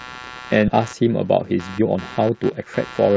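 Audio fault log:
Throughout: computer activity noise, a buzzing, chirping layer pulsing roughly 150 times a second at about 20 dB below the speech, following machine load rather than the talker.
0.68 s: skip ahead, playback jumps forward with no gap, losing roughly 0.7 s of speech as queued audio is discarded, unlike a dropout, which leaves silence or fill.
0.80 to 3.10 s: jitter buffer speed-up, speech runs at 110 percent with pitch unchanged as short pitch-period pieces are trimmed, shedding about 0.2 s and sounding hurried.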